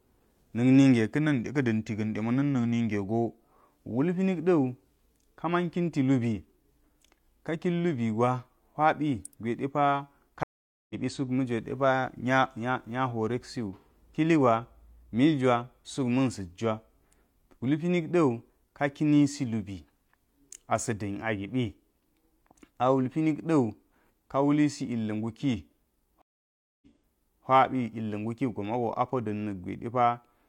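A speech recording with two stream reconnect breaks. At 10.43 s the audio cuts to about 0.47 s of silence and returns at 10.95 s roughly a third of a second further on, skipping material. At 26.22 s a 0.6 s gap resumes 0.64 s earlier, repeating speech until 27.46 s. Unlike a buffer underrun, which picks up exactly where it stopped, a restarted decoder resumes at a different stream position.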